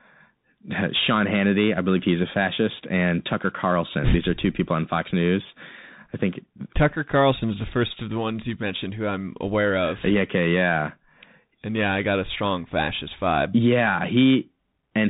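Speech through a Bluetooth CVSD headset codec for its whole length. Nothing passes above 3.8 kHz, and the adaptive one-bit coding, consistent with a 64 kbps link, leaves plainly audible damage: scratchy s sounds and granular hiss, unlike a clean telephone band-limit.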